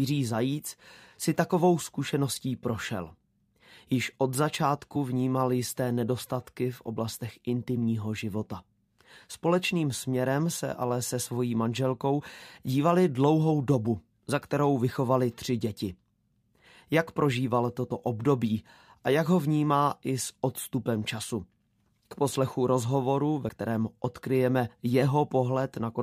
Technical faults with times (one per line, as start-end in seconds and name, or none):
4.95 compressed frames skipped
12.19-12.21 compressed frames skipped
23.48 compressed frames skipped